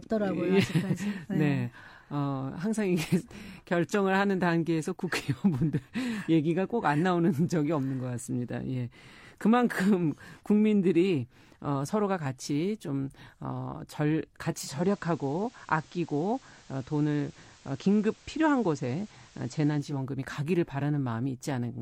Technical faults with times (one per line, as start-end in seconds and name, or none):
14.45-20.08 digital radio blending to analogue